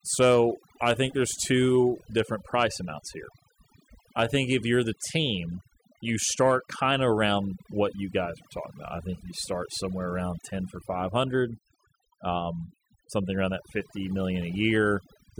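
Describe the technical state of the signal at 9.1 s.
At 9.1 s you're hearing overdone noise removal, present through the whole clip: the reducer was set so hard that it pulls quiet frequency bands near its noise estimate down to nothing, so the background goes to twinkly near-silence.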